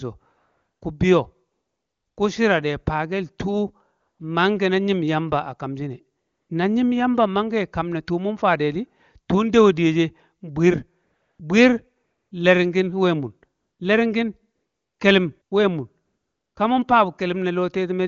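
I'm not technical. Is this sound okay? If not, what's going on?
No. This is AMR comfort noise. Ten times, between 0.37 and 16.55 s, the phone decided the talker had paused and stopped sending speech. A smooth, artificial hiss fills each gap for 0.1 to 0.66 s. The longest comes just before "ku shira de".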